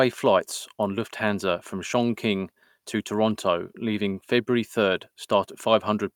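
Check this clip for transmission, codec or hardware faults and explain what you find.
Nothing in the speech signal points to a transmission, codec or hardware problem, with no audible disturbance anywhere in the recording.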